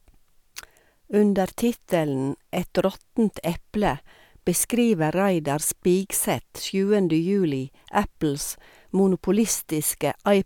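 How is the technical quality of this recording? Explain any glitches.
No glitches or technical faults can be heard anywhere.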